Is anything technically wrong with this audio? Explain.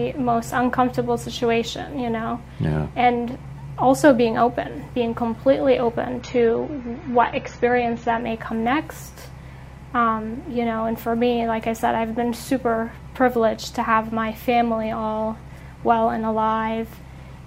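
Yes. An adaptive stream at a lower bitrate runs from 6.21 to 8.21 s. For those two seconds the player switched to a cheaper encoding of the same audio, most likely because the connection slowed, and the sound points to roughly a drop from 96 to 24 kbit/s AAC. Nothing is left above 6.9 kHz, so the top end turns dull and smeared with audible codec artefacts. The quality then snaps back abruptly, with no gap or dropout at either boundary.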